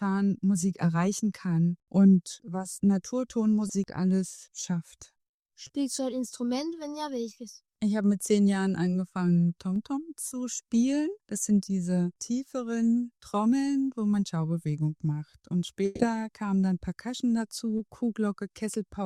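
You've got an audio stream that came over a lossy network link, and it shows two kinds of damage. First, there's short concealed packet loss at 3.67–3.71 s, 5.67–5.71 s, 10.27–10.33 s and 17.77–17.81 s. In each spot a chunk of audio didn't arrive in time, about 20 ms each time except the 10.27 s one, which is about 40 ms. The decoder papered over the hole by extending whatever it was last playing, then crossfaded back, so each one comes across as a quick smear or wobble rather than a gap. Second, there's a burst of packet loss at 15.85–16.01 s. About 140 ms went missing in one go, probably several packets in a row. The concealment never drops to silence here. It stretches the last sound out and lets it decay, giving a held buzz or fading hiss, and then the audio picks up again further along with that stretch simply gone.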